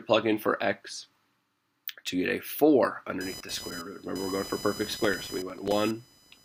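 From 3.21 s until the end, a buzzing, chirping texture sits under the sound, pulsing at around 1 kHz and roughly 15 dB below it. This is computer activity noise. Changing load on the processor, graphics card or mouse shifts the ground the audio circuit shares with them, so the interference rises and falls with what the computer is doing rather than with the recorded sound.

From 5.04 to 5.72 s, on top of that buzz, a burst of gritty crackle tears through the sound. This is processor overload crackle. The machine repeatedly failed to finish its small audio buffers in time, and each missed deadline replayed a fragment of old audio with hard edges. The spacing fits buffers of roughly 3 ms, and the stretch points to around fifteen misses before the crackle stops.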